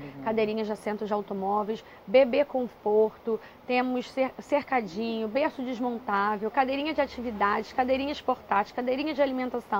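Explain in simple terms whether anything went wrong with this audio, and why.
Nothing went wrong that I could hear; listening through, no problem stood out at any point.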